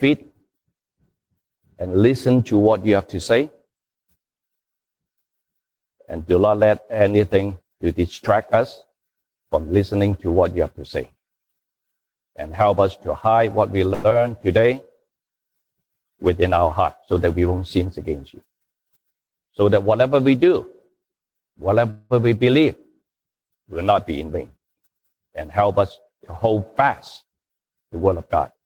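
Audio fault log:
13.93–14.14 s, long network dropout: The sound smears into a fading buzz for about 0.17 s. It returns with roughly 60 ms gone, likely from lost packets.
14.60–15.07 s, jitter buffer slow-down: Repeated pitch periods add 50 ms. The sound plays at 91% speed, drawn out but at unchanged pitch, rebuilding the buffer reserve.
16.29–17.49 s, 24.11–24.66 s, 27.49–28.57 s, jitter buffer speed-up: The sound runs at 109%, 112% and 110% speed, hurried at unchanged pitch. Each stretch trims up to about a tenth of a second of excess delay.
21.90–22.13 s, call audio freeze: The last sound is held as a fading buzz for 198 ms. It then resumes where it stopped with nothing lost, likely because packets were held up in transit.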